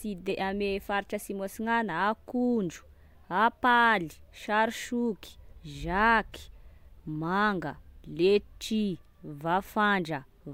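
Careful listening turned up nothing that stood out as a technical fault anywhere in the speech.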